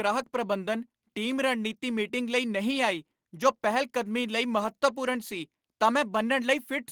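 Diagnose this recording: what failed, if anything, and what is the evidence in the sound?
Nothing in this speech recording points to a failure at any stage from capture through playback.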